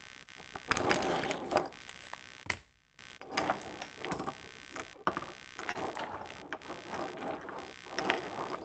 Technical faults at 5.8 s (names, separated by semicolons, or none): computer activity noise; short stall from a late packet